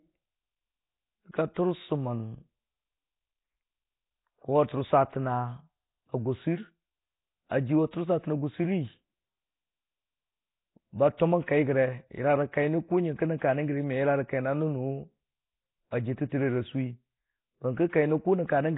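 From start to finish the speech carries a rough, hissy halo and a smeared, underwater blur, with nothing above 3.9 kHz. The likely cause is heavy Nellymoser compression, the old Flash microphone codec. It gives quiet bands no bits and refills them with noise, so the hiss follows the voice rather than sitting beneath it. Unlike the metallic swirl of a starved MP3, the damage is a steady grainy fizz, which fits a rate around 16 kbps.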